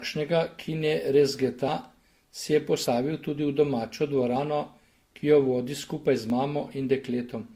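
A speech recording with two technical faults. Throughout, the audio carries a mix of coding artefacts that do not come from a single codec. The different artefacts are heard together. This is most likely transcoding between lossy codecs. The sound points to a chain of roughly 48 kbit/s stages, such as HE-AAC, then Vorbis, then Opus. Each pass spends bits re-encoding the previous damage and adds its own. Nothing remains above 20.1 kHz. There are also three jumps where the sound skips forward with no gap of silence. The first is at 1.68 s, just after "ki ne rezgeta". The second is at 2.86 s, after "si je". Each of these skips around 70 ms. The third, at 6.3 s, is smaller and skips about 20 ms. These are likely dropped buffers from an overrun. The samples were overwritten before being read, and the remaining audio on either side was spliced together.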